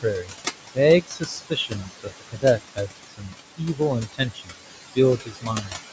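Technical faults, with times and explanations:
Throughout, noise suppressor artifacts: the suppressor pulls the background down by about 20 dB in frames it judges to be noise, then opens again under speech. The room noise, only about 8 dB below the speech, therefore sinks in the gaps and surges back behind each phrase.
0 to 0.35 s, 1.02 to 2.89 s, 3.08 to 3.35 s, 3.57 to 3.81 s, 4.13 to 4.54 s and 5.18 to 5.76 s, speech cut by the noise suppressor: in these stretches the suppressor mistook quieter parts of the speech for noise and turned them down by about 16 to 21 dB. The longest span loses around a second of sound in scattered pieces, and the others lose about 0.1 to 0.4 s each. Soft consonants and tails sound swallowed or faint.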